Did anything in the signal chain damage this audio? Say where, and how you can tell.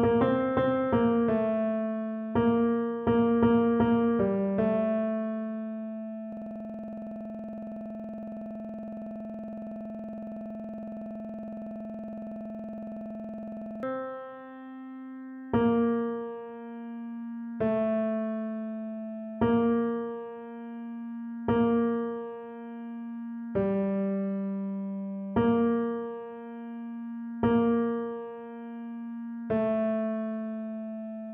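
Yes. From 6.33 to 13.83 s, one 46 ms fragment repeats exactly, a rough stutter at 21.5 Hz. This system hang loop sits at the driver or buffer stage: the host froze while the hardware kept replaying its ring buffer, which fits a 2048-sample buffer.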